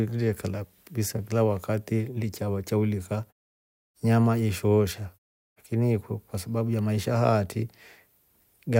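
No technical faults are audible.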